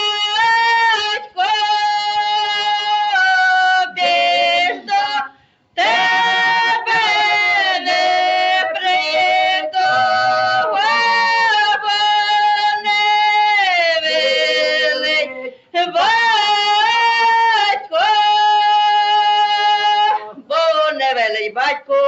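A noise suppressor built for speech was left on for the whole clip, a noise suppressor applied to music or sounds. It reads sustained parts as noise, so the level pumps by roughly 5 dB. Sound cut by the noise suppressor appears at 1.02–1.38 s, 5.28–5.77 s, 15.54–15.74 s and 20.24–20.5 s. Held or fading sound sinks by about 12 dB, or about 11 dB in the last one, then recovers. Above all this, nothing reaches past 8 kHz.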